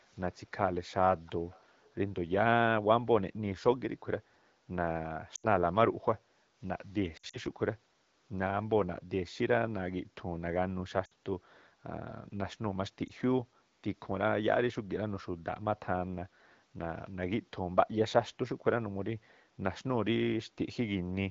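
Echo leak appears three times early on: very faintly from 0.13 to 0.2 s, then a little louder, though still faint, from 1.26 to 1.31 s and from 1.5 to 1.63 s. Each is a delayed copy of the speech trailing the original by 330 ms. The likely cause is a loudspeaker at the far end whose echo canceller let part of what its microphone picked up pass back down the line.

Lost AMR speech frames occur four times. From 5.35 to 5.46 s about 80 ms of audio is missing, which fits four 20 ms frames. From 7.17 to 7.38 s the losses total 100 ms, scattered across 160 ms, with the longest gap 60 ms. From 11.05 to 11.13 s 60 ms is lost, and at 13.07 s a single 20 ms gap. The decoder covered each gap by repeating the last good pitch and vocal tract settings at falling gain. The longer runs drop to near silence within two frames, as expected on this wideband AMR link. The single frame is a brief dip or warble, and the speech comes back a little rough.

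Background gated by the echo canceller occurs from 6.18 to 6.59 s, about 0.4 s in all. While the far-end loudspeaker was active, the canceller turned the microphone path down, and the room sound drops by about 9 dB at its deepest before coming back once the suppression releases.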